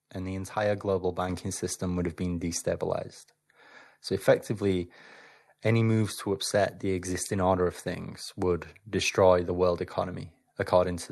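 Microphone volume stepped up at 1.29 s: the call software judged the input too quiet and raised the microphone's gain in a single step of about 5 dB. The speech and the background noise both jump louder together at that instant, heard through the call codec's band that stops near 12 kHz.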